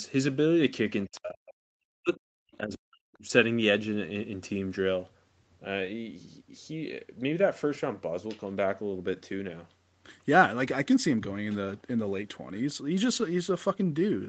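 From 1.05 to 3.25 s the speech dips deeply, by around 40 dB. This is likely speech suppressed in double talk.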